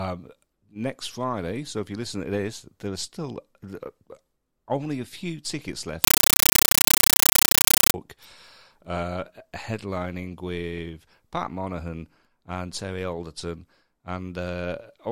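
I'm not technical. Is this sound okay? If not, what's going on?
No. Just after "a few tickets left", from 6.04 to 7.94 s, the system received what sounds like a Dolby Digital data stream and played it as if it were ordinary sound instead of decoding it first. This fault is called compressed stream played as audio. Each packet of coded data comes out as a short blast of noise, about 9 ms long, followed by silence, about 31 times a second, so the speech is replaced by very loud, chattering static.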